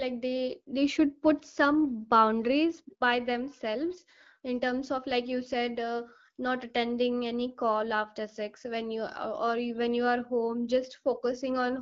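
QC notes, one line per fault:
No faults heard in this speech clip.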